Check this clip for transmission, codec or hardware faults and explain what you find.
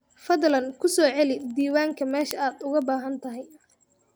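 There is one fault, word clock ticks. From 0.19 s to 4.13 s the speech carries sharp, uneven clicks at a steady rate of about ten per second, some forty in all. A digital link is being read on an unlocked clock that runs about 200 ppm off the sender's, so each slip misreads a few samples and drops or repeats one.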